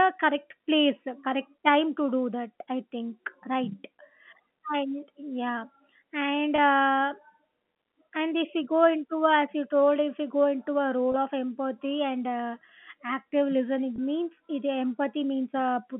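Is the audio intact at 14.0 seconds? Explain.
No. Packet loss with pitch repetition hits from 13.96 to 13.98 s; about 20 ms of audio, consistent with one packet, is bridged by repeating the last pitch period, giving a brief held buzz.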